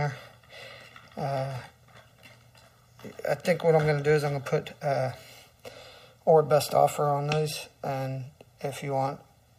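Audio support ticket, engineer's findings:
Channel delay (comb filtering), present throughout. One channel lands roughly a millisecond and a half late before the mono fold-down, pointing to the summing or routing stage. Shared content cancels at evenly spaced notches from around 300 Hz up. Sound is hollow and phasey.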